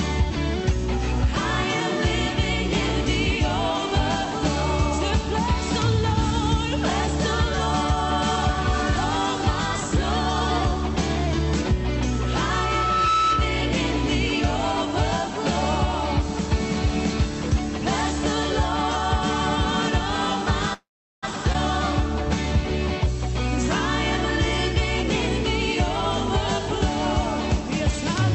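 From 12.11 to 13.79 s, a loudspeaker feedback squeal occurs. The microphone picks up the loudspeaker it feeds, and at 1.3 kHz the loop gain rises above one. A single tone swells over about a second until it is roughly as loud as the rest of the sound, then stops.

At 20.73 s, a call audio freeze begins, most likely because packets were held up and the jitter buffer ran dry. The last sound is stretched into a brief fading buzz, followed by about 400 ms of silence. Playback resumes at 21.25 s from where it stopped, nothing lost, just delayed by 491 ms.

From 21.53 to 21.56 s, the stream skips ahead. Roughly 200 ms of audio was dropped while later audio was already waiting, so playback jumps forward. The two sides are joined by a 16 ms fill, and the missing stretch is heard as an abrupt cut.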